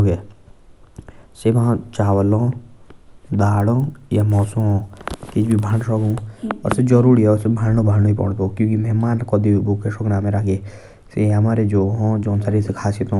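Resampler restarted on every block, 3.5 to 6.1 s: the rate conversion, which fits a 24 kHz to 48 kHz step, treats each 100 ms block in isolation, so every block edge gets a small error. The speech carries regular ticks at 10 Hz through this stretch.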